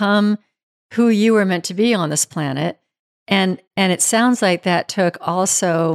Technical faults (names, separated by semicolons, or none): none